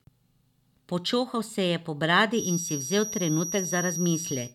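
A loudspeaker-to-microphone loop likely sat right at the edge of feedback from 2.3 s, just after "je po", through to the end. This feedback whistle holds a single tone near 5.8 kHz, a thin, steady whine sitting well below the speech and slowly swelling and fading in level.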